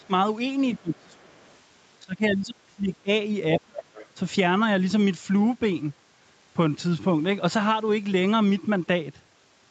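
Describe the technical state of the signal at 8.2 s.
At 8.2 s the speech is intact, with no dropout, glitch or distortion, just the band-limited sound of a call path with nothing above about 8 kHz.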